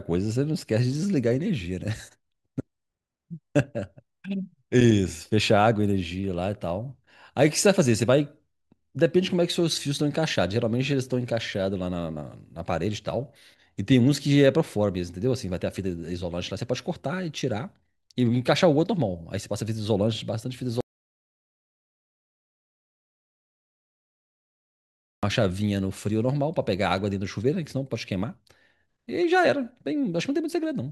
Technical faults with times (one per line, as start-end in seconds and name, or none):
20.81-25.23 audio dropout to silence